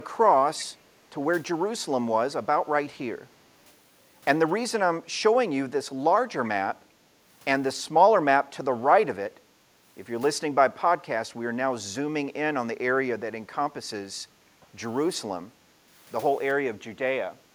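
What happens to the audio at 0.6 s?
An echo leak appears from 0.58 to 0.65 s: a brief, faint delayed copy of the speech, trailing the original by about 378 ms and sitting roughly 20 dB below it, so it comes through as a quiet scrap. The likely cause is a far end playing the call over a loudspeaker, where the echo canceller failed to remove all of what its microphone picked up and sent that residue back.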